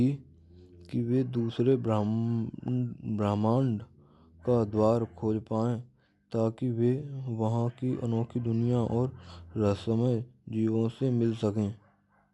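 From start to finish, the speech sounds dull and roughened. Nothing is heard above about 11.4 kHz, so the top of the band is simply missing. Around voiced sounds there is a grainy, fluttering haze. The likely cause is Dolby Digital compression at a low bitrate, which fits about 64 kbps. Short of bits, the encoder narrowed the band and left many frequency lines empty. The decoder then filled those gaps with noise.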